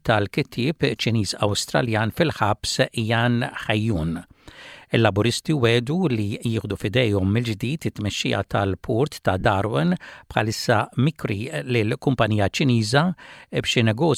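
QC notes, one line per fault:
9.40 to 9.46 s, lost LE Audio frames: the Bluetooth LE Audio link dropped packets, losing about 52.5 ms of audio scattered over 60 ms, with the longest gap around 50 ms. That pattern fits seven frames of 7.5 ms. The LC3 decoder filled each hole by repeating the last good spectrum with randomised phase signs and fading it as the run went on. The sound therefore blurs into a brief noisy smear that sinks toward quiet before normal audio returns.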